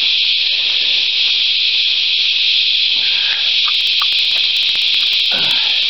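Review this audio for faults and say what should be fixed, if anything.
Periodic USB or driver dropouts run from 3.75 s to 5.83 s. Regular ticks repeat every 0.063 s, about thirty in all. Each time, roughly a millisecond of audio is skipped. Something is blocking the bus or driver on a fixed cycle. To prevent this, remove the background task stalling the USB bus, or enlarge the audio buffer.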